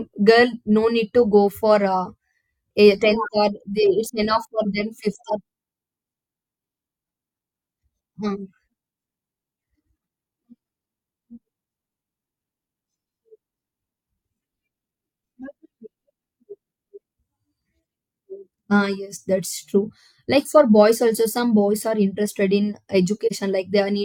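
At 23.26 to 23.32 s the speech sinks into a brief dip, an AAC frame loss with muting. The gap fits one lost frame of about 43 ms, zeroed by the decoder, and the overlapping windows fade it out and back in, unlike the abrupt click-bounded gap of a dropout.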